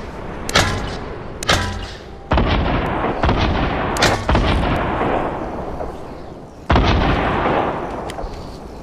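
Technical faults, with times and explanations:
0.96, 2.86, 4.76 and 6.66 s: audio missing between chunks. At each point about a tenth of a second of sound drops out, and the material on either side is joined directly with no silence, so it is heard as an abrupt skip. The skips recur every 1.9 s, which fits 2.0 s chunks with roughly 0.1 s lost at each boundary. The likely cause is the recorder or processor dropping samples while closing one chunk and opening the next.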